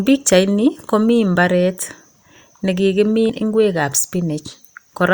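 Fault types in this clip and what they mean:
Compressed frames skipped: 20 ms frames go missing, so the speech jumps ahead about a tenth of a second twice.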